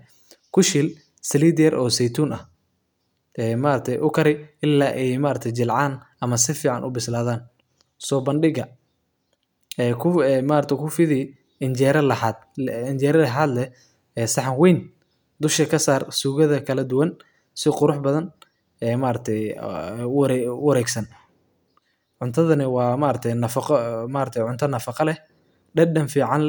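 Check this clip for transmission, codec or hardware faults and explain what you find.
Nothing here points to a transmission, codec or hardware problem; the speech runs along without any glitch or disturbance worth flagging.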